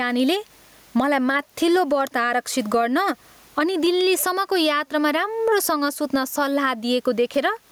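Gain pumping runs throughout the speech. The room background sits about 41 dB below the speech, and the gain swings about 15 dB. The likely cause is excessive input gain with a fast limiter clamping each peak.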